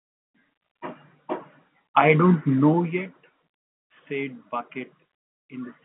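Nothing goes wrong anywhere in this speech clip; it just sits in its telephone-style band, topping out a little under 4 kHz, with the level easing up and down now and then the way it's meant to.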